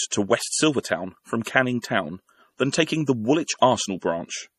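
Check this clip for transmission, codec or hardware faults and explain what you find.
The clip shows two codec faults: heavy lossy compression throughout and two brief pre-echoes.

MP3 compression affects the whole clip. Nothing is present above 13.8 kHz, a hard ceiling where the encoder dropped the treble. The damage is plainly audible. This likely comes from MP3 coding at a low bitrate, and the sound fits roughly 40 kbps. With so few bits, weak frequency lines are zeroed and flicker between frames. That gives the speech a watery, swirly texture, and sibilants turn metallic and chirpy.

Pre-echo occurs at 0.83 s, spread over 17 ms, and again from 1.44 to 1.46 s, spread over 25 ms. The codec spreads its quantisation noise across a whole block. A sharp onset late in the block leaves noise, sized for the loud part, sitting in the quiet just before it. So each attack is preceded by a short burst of hiss and lands soft and smeared.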